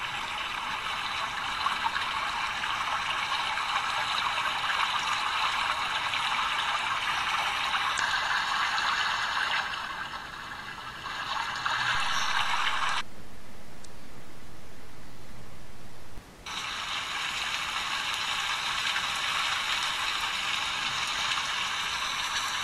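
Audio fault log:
7.96 to 13.86 s: damaged data in a compressed stream, at 7.96 to 8.00 s, at 13.00 s and at 13.81 to 13.86 s. Corrupt bytes in the coded frames make the decoder misread them and lose sync while hunting for the next frame header, leaving brief artefacts of 48 ms or less.
11.95 to 16.18 s: DC step. The waveform's zero line jumps at 11.95 s and the offset is gone by 16.18 s. Each shift of baseline is heard as a low thump or click, while the sound itself continues unchanged.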